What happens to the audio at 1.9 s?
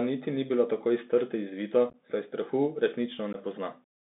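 Between 1.90 and 1.96 s the Bluetooth link between headset and phone dropped voice packets, and nothing concealed the gaps. This is unconcealed Bluetooth headset packet loss. Around 30 ms of audio is missing, spread over roughly 37.5 ms in about seven short losses, the longest about 11 ms. Silence or an idle pattern fills each hole, so the speech breaks into a rapid, chopped crackle with abrupt edges, and because the link is CVSD it returns briefly quieter afterwards.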